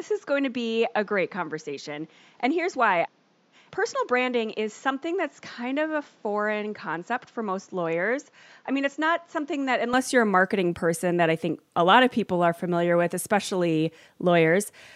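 Speech clip in which the first 9.94 s are band-limited, with nothing above 7.4 kHz, roughly 5 dB quieter and carrying a faint added noise floor. It clears abruptly, with no gap, just before "you're a marketing person", which points to the input likely being switched to a poorer device and then back.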